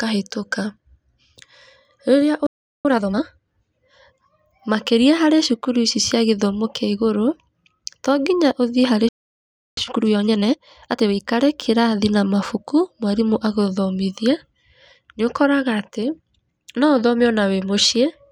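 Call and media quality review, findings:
Playback stall, 2.47–2.85 s: speech cuts out mid-flow for about 380 ms. Likely player buffer underrun or blocked audio thread. Waveform flatlines, spectrogram shows a clean vertical blank band. Playback stall, 9.09–9.77 s: same symptom, longer gap of about 680 ms; same mechanism, output silent until the player recovers. Waveform shows a flat gap, spectrogram a wider empty column.

Time-compressed catch-up, 2.85–3.23 s: speech runs at 2.0x speed right after the first stall, pitch unchanged. The player trims its backlog by cutting and cross-fading short segments. Spectrogram shows formants and harmonics squeezed horizontally, with no vertical shift. Time-compressed catch-up, 9.77–11.13 s: 1.5x, same mechanism after the second stall. The waveform envelope is compressed.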